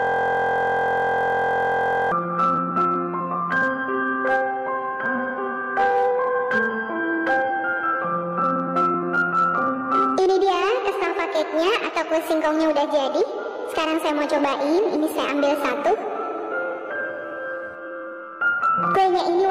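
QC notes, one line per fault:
0.00–2.12 s, system hang loop: already under way when the clip opens, a 23.22 ms slice of audio repeats exactly, about ninety times, fusing into a steady 43.1 Hz buzz. That fits a stalled system replaying a 1024-sample ring buffer. Unlike mains hum, the buzz carries the frozen sound's own timbre, then stops abruptly.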